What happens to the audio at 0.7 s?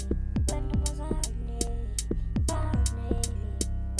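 Nothing goes wrong at 0.7 s; the audio plays through that moment intact, with no dropout, click or distortion.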